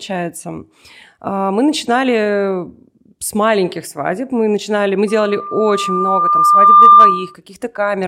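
Loudspeaker feedback squeal starts at 5.07 s, just after "начинали мы", and lasts until 7.34 s. The microphone is picking up its own loudspeaker. At 1.2 kHz the loop gain passes one. That tone swells over about two seconds, ending roughly 15 dB above the speech.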